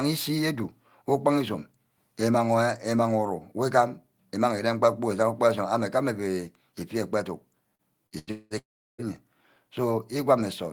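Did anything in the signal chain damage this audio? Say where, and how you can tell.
Yes. From 7.75 to 8.54 s there is repeated packet loss: four network gaps, the longest 193 ms, each patched by extending prior sound, so speech turns choppy and robotic.

From 8.59 to 9.01 s the sound trails into a fading buzz, then 350 ms of silence, likely a long network dropout losing about 400 ms.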